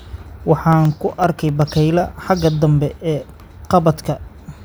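From 0.73 to 1.62 s the speech carries CD scratch ticks: eight short, evenly spaced clicks, roughly nine per second, each lasting a few milliseconds at most. A surface blemish defeated error correction once per disc revolution, and the player patched the damaged samples.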